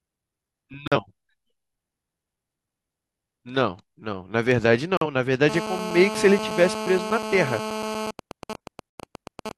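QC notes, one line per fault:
0.88–0.97 s, 4.97–5.06 s and 8.91–9.04 s: digital broadcast dropout. The receiver muted on bad frames, leaving silent holes; the first two fit one lost 43 ms frame, the last fits two.
5.49–8.11 s: GSM phone buzz. A nearby 2G phone in a call pulses at 217 Hz; rectified, this gives a hard, harmonic-rich rasp about 8 dB below the speech.
8.19–9.52 s: GSM signalling bursts. With the caller silent, the phone sends only sparse bursts, heard as even ticks with a longer 217 Hz buzz twice a second, somewhat quieter.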